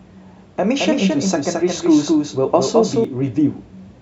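From 0.78 s to 3.05 s the speech is heard twice: a second full-band copy trails about a fifth of a second behind, a few dB quieter, with no decay or room colour, switching in and out abruptly. This doubled audio track likely comes from a second, slower capture path mixed in.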